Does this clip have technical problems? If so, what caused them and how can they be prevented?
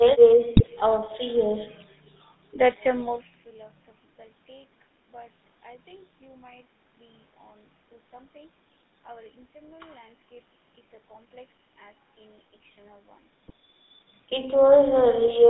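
Yes. The GSM full-rate codec runs through the whole speech clip, with a buzzy, gravelly roughness and nothing above about 3.7 kHz. Unlike plain band-limiting, the regular-pulse excitation rebuilds the voice coarsely, which fits a 13 kbps link. Prevention: use a wideband codec such as AMR-WB or Opus end to end.

GSM bit errors cause brief squawks and gargling from 0.56 to 0.68 s and from 13.44 to 13.50 s. Corrupted filter, pitch or gain values distort whole frames rather than silencing them as packet loss would. Prevention: improve signal strength, or use stronger channel coding and bad-frame masking.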